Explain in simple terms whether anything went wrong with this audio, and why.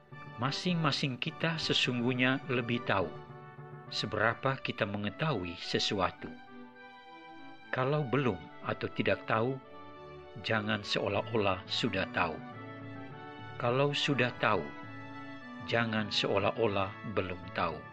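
Nothing went wrong with this audio that a listener can pick out. At no point does anything happen that would count as a problem.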